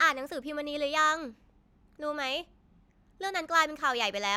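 No technical faults can be heard anywhere here.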